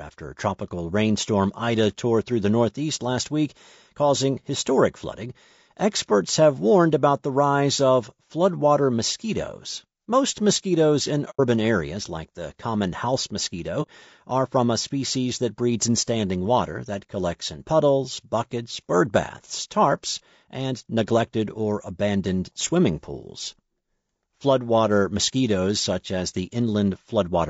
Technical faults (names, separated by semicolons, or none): low-delay AAC compression; AAC frame loss with muting